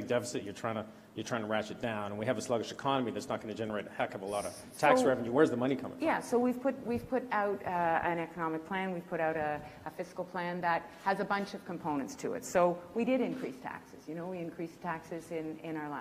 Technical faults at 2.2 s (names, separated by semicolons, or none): none